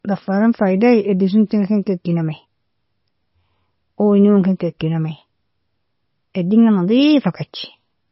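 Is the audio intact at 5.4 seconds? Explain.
No. At 5.4 seconds the speech sounds dull and watery, with a swirling, metallic edge on s sounds and nothing above 5.6 kHz, as it does throughout. This is likely heavy MP3 compression at a very low bitrate, cutting the treble and switching weak frequency lines on and off between frames.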